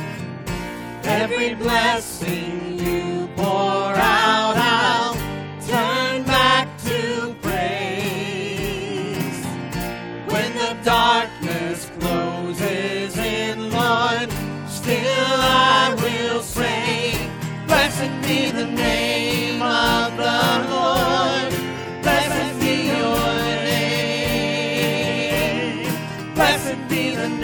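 From 22.24 to 24.02 s there's a doubled audio track: a dry copy trailing about a fifth of a second behind, a few dB down, likely from a second, slower capture path.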